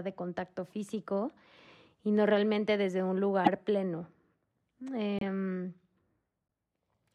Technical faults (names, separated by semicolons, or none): corrupt frame decoded